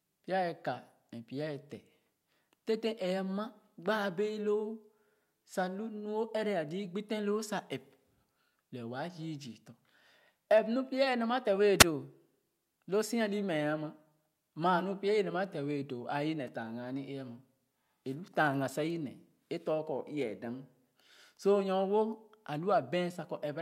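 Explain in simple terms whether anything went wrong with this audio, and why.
Something did go wrong, at about 11.79 seconds into this speech. It is a wireless microphone squelch dropout. The radio link from the microphone to its receiver weakened for a moment. When the signal gets too weak, the receiver shuts off its output rather than pass on noise. Here the whole disturbance lasts about 55 milliseconds, ending near 11.84 seconds. The full mute inside it is extremely short, so it comes across as a quick blip in the sound.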